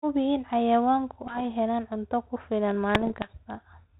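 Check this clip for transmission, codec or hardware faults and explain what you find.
Two bursts of bit errors on an ADPCM link stand out in this speech, heard over a G.726 path that fits 32 kbit/s with its band topping out near 4 kHz. The first runs from 1.26 to 1.45 s, between "in xayawaanku" and "helaan cunto ku filan". The second, longer one runs from 2.95 to 3.36 s, after "helaan cunto ku filan". A small fraction of the coded bits, somewhere under one percent, arrive flipped. Each bad code word throws off the decoder's step size and predictor, so the error rings on for a few milliseconds instead of staying one sample wide. The result is pops and rough, gritty flurries with brief jumps in level. Unlike packet loss, the sound never drops to silence or repeats itself. Unlike the steady hiss of a low-rate coder, the roughness is confined to these two stretches.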